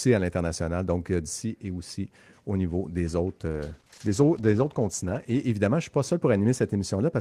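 Right after "aussi au niveau des", from 3.48 s to 5.47 s, the speech turns rough and muffled, losing its highs until "évidemment je ne suis". It's a call bitrate drop: coarser coding and a trimmed top band, fitting a fall from 32 to 13 kbps.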